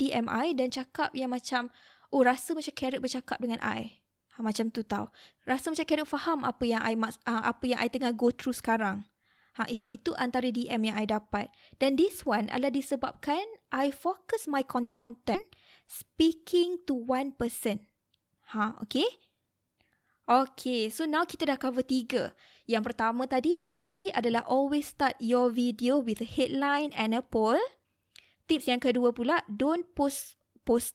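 At 9.73 s the speech halts in a call audio freeze lasting until 9.97 s. The last sound carries on as a fading buzz for about 210 ms, ending in about 50 ms of silence. The likely cause is delayed packets emptying the jitter buffer. Speech then resumes where it stopped, with nothing lost.

From 14.07 s to 17.98 s a jitter buffer speed-up runs the speech at 105% of its normal rate. Pitch stays the same. Tiny pitch-period slices are cut repeatedly, trimming roughly a fifth of a second, and the delivery sounds slightly hurried.

Inside that stretch, at 14.83 s, a second freeze stretches the sound for 270 ms until 15.13 s, with no silence. Late packets likely starved the buffer again.

At 15.34 to 15.38 s the playback jumps in a skip ahead. Around a fifth of a second of speech is discarded. The two sides are spliced almost directly, so the jump is abrupt.

From 15.84 s to 16.70 s a jitter buffer slow-down takes over. 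Single pitch periods are repeated to rebuild the reserve, adding 114 ms. Speech runs at 88% speed, at the same pitch, and sounds drawn out.

From 23.22 s to 30.74 s a second speed-up runs at 106%. Roughly half a second is removed, and the speech sounds rushed through that stretch.

At 23.51 s, early in that stretch, the longest freeze begins and lasts until 24.08 s. A fading buzz fills 540 ms, including about 210 ms of silence. The likely cause is packets held up long enough to drain the buffer completely.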